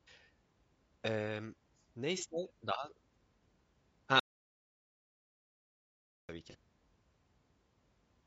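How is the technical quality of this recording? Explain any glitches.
The technical quality is poor. Codec damage runs through the whole recording, two brief concealed gaps break it up, and one long stretch drops to dead silence.

Throughout, the speech sounds rough and grainy. Noise fills the gaps between the voice's harmonics, and the top band sounds thin and synthetic. The damage is plainly audible. The likely cause is low-delay AAC compression, AAC-ELD, at a low rate that fits about 32 kbps. Its short frames resolve pitch poorly and spend bits fast. Fine harmonic detail is lost.

At 2.18 to 2.23 s, and again at 6.50 to 6.55 s, there is a short smeared, noisy patch. This is AAC frame loss with concealment. Each gap fits a single lost frame of about 30 ms. The decoder filled the hole by reusing the last good spectrum with altered phase or energy. That is why the sound blurs briefly instead of going silent.

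From 4.20 to 6.29 s, about 2.1 s, the sound cuts off mid-flow. Then it returns abruptly. The gap is silent with no room tone. This is an audio dropout to silence. The input was likely lost while the recorder kept writing silence. Whatever was spoken in that stretch is gone and cannot be recovered.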